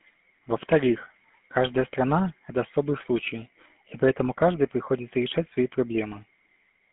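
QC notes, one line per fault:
Throughout, GSM full-rate codec: the speech has been squeezed through the original GSM coder, which fits a 13 kbps full-rate stream. The coder models the vocal tract and rebuilds the excitation from a sparse train of regular pulses, discarding most of the fine detail, so every voiced stretch takes on a plainly audible buzzy, gravelly roughness. The band is held to a phone line of roughly 150 Hz to 3.4 kHz, with nothing at all above 3.8 kHz, leaving the sound dull and boxed-in.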